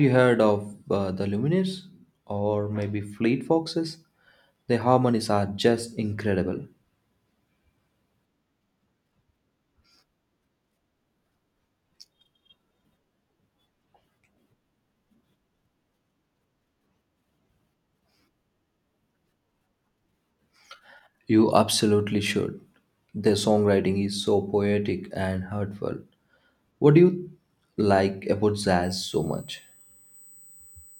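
USB whine enters this speech clip at 28.83 s, just after "do you like about", and runs to the end at 31.00 s. It is a fixed-pitch tone at 8 kHz, strongest at its 16 kHz multiple, about 30 dB below the signal. This fits current drawn in 125-microsecond USB microframes leaking in through power or ground.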